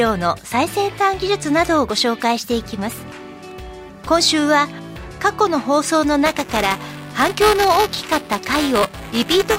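From 6.26 s right through to the end, the audio picks up a steady robotic buzz at about 375 Hz. That's buffer tearing. The writer and the hardware reader have drifted out of step on the ring buffer, so inside every period a small slice of stale audio, only a few milliseconds old, gets played with hard joins on both edges. A buzz at that rate fits a 128-sample buffer, and it's only there when there's signal.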